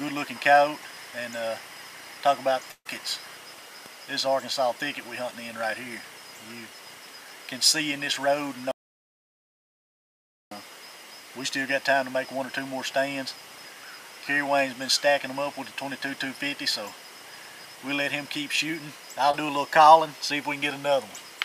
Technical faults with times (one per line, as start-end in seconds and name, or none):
2.71-2.87 burst of packet loss
8.71-10.51 audio dropout to silence
19.31-19.35 short concealed packet loss